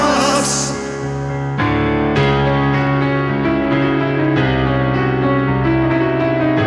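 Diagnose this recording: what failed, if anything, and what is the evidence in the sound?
Nothing in the signal points to a failure at any stage of the recording or playback chain, and the audio remains continuous and technically intact throughout.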